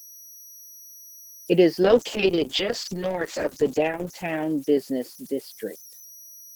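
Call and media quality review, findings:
Converter idle tones throughout: whistle near 5 kHz, about 27 dB under the speech. Undithered delta-sigma ADC cycling on low-level input, so the pattern tones poke through.

Call bitrate drop, 1.85 to 5.73 s: speech goes rough and muffled, worst for about 2.3 s. Bandwidth estimate fell, Opus starved, roughly 32 down to 8 kbps by ear.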